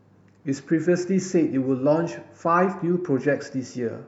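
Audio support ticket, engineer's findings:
No audible faults found in the speech recording on review; nothing to attribute to any component in the capture or playback chain.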